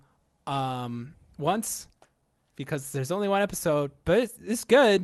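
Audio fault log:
throughout: clock drift between sender and receiver. The sending side's clock runs roughly 4 percent fast, so audio arrives a little quicker than the receiver plays it and the jitter buffer keeps filling rather than draining. Because the sender is the faster one, the buffer never runs empty, so there are no brief silences of the kind a slow sender causes. Unlike packet loss, nothing is smeared or muted. The error is one steady rate mismatch, heard only through its corrections.
0.16 to 4.79 s: repeated timing corrections. To keep up, the receiver trims short slices out of the stream again and again across this span, all in the same direction, so the net playback runs at about 104 percent. The cuts are unevenly spaced and each is tiny, small edits rather than clicks or gaps. The top end stops near 12 kHz, which fits an Opus call at a moderate bitrate.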